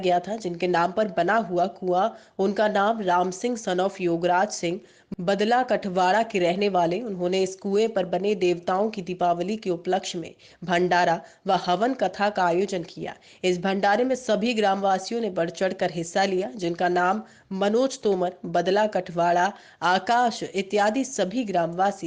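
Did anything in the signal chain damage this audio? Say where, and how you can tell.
No, nothing in the signal chain has left an audible mark on this audio; it comes through as a continuous, intact signal with no damage traceable to any stage.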